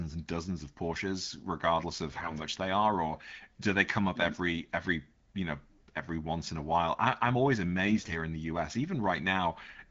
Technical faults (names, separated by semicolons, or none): AMR bit errors